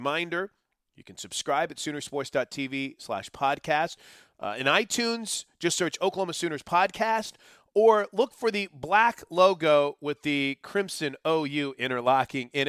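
A speech recording with no technical faults to report. Nothing heard in it points to a problem anywhere in the recording or playback chain.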